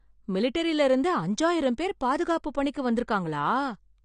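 From the first moment to the end, the speech sounds dull and smeared, with nothing at all above 9.8 kHz and a fizzy, warbling edge on sibilants and held sounds. That's likely AAC compression, AAC-LC at a low bitrate; the damage points to something around 32 kbps. The encoder runs out of bits, so it chops off the top end and quantises the remaining bands coarsely, leaving gaps and noisy patches that shimmer from frame to frame.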